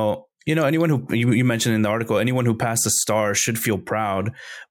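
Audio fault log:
No fault is heard in this speech clip.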